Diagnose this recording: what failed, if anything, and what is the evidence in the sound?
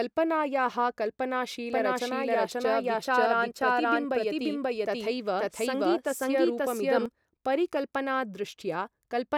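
A doubled audio track runs from 1.72 to 7.06 s: a second, equally loud copy trails by about half a second, starting and stopping abruptly, likely a second, slower capture path.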